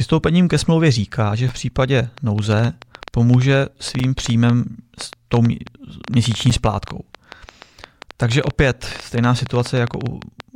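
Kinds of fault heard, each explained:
Gap between chunks: The audio plays in 2.5-second pieces, with a short silence left at each join. Nothing is lost, but the sound cuts off abruptly. Holes of about 7 ms fall at 1.49, 3.99 and 6.50 s. The first comes between "ke smlouvě říká že" and "v případě".
Train of clicks: Pulses of much the same shape tick over the sound from 2.18 s, just after "říká že v případě", to 10.41 s. They come unevenly, about 7.7 per second, roughly seventy in all, peaking around 10 dB above the sound. Likely interference.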